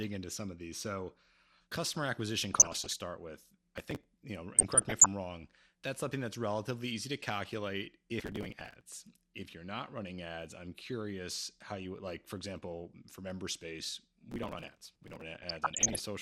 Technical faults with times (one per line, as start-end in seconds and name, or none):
0.00-16.22 MP2 compression
2.54-2.94 DAB burbling
3.78-4.05 processor overload crackle
4.56-5.07 DAB burbling
8.20-8.81 processor overload crackle
14.31-15.22 processor overload crackle
15.43-16.00 DAB burbling